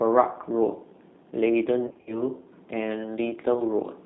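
Speech that sounds rough, slightly synthetic and band-limited to roughly 150 Hz–3.7 kHz throughout, the plainly audible signature of the G.729 codec, which fits G.729A at 8 kbit/s. From 1.87 to 2.23 s the sound smears into buzzy, fading fragments where about 140 ms of audio went missing over 200 ms, in runs up to 60 ms. This is VoIP packet loss concealed by the speech codec, which extrapolates pitch and filter and stays distorted afterwards. A shorter 20 ms loss gives a brief smeared blip from 3.54 to 3.61 s.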